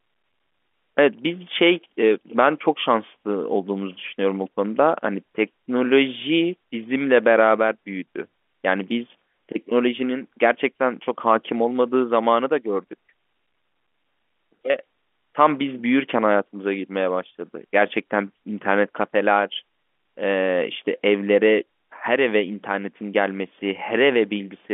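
No technical faults are audible.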